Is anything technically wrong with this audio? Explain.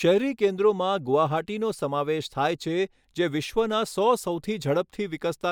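No, nothing technically wrong stood out on listening to this speech recording.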